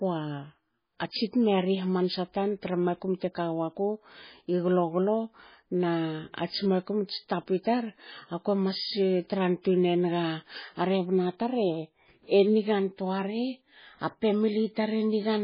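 From start to finish the speech has a dull, watery, swirling quality, with no content above 5 kHz and heavy smearing of consonant attacks, most likely MP3 compression at a very low bitrate, which fits something around 16 kbps. Short of bits, the encoder has cut the treble and dropped weak frequency lines frame by frame. On a spectrogram there is a flat ceiling at 5 kHz and a blotchy, holed texture below it.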